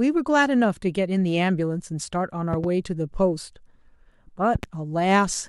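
Speech with two loud pops, each a quick double thump about 10 dB over the speech, at 2.53–2.66 s and 4.55–4.66 s, likely from a plug, switch or static discharge.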